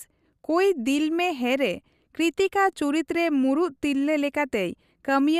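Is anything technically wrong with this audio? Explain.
No, nothing technically wrong can be heard in this speech recording. No part of the clip calls for correction.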